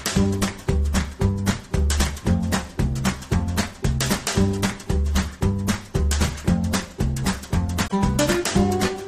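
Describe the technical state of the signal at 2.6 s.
Nothing is wrong with the audio at 2.6 s; the signal there is intact, with no dropout, clipping or other fault.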